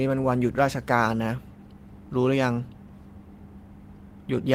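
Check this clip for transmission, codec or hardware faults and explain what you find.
Nothing turns up here: I can't hear any transmission, codec or hardware fault anywhere in this bit of speech.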